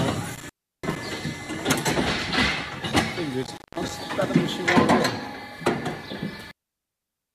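At 0.35 to 0.97 s and again at 3.43 to 3.91 s, intermittent contact from a loose connection drops the sound for about 340 ms and 190 ms. Crackle marks each edge, and faint hiss fills the gap. On a waveform these are near-flat stretches bracketed by sharp spikes.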